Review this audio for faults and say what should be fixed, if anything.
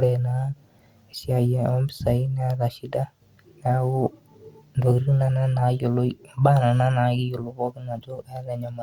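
No faults turn up in this audio, so nothing needs to be fixed.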